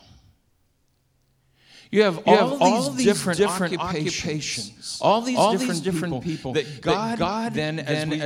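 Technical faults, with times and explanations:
Throughout, doubled audio track: every syllable of the speech returns about a third of a second later at roughly equal loudness, full-band and dry, with no decay or further repeats. This sets it apart from echo or reverb. The likely cause is a second, slower capture path mixed in.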